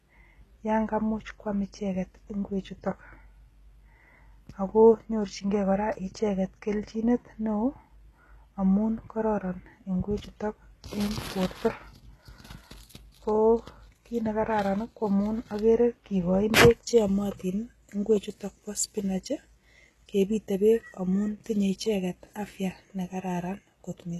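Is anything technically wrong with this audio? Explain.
Yes. Throughout the speech, the treble is false: sibilants come out gritty, metallic and lispy, and nothing reaches above 12.3 kHz. The likely cause is heavy HE-AAC compression, which fits a bitrate around 16 kbps. The codec keeps only the lower spectrum and fakes the top by copying lower bands upward under a coarse envelope, so the upper harmonics don't line up with the real ones. A simple low-pass would sound dull instead, with its treble missing rather than synthetic.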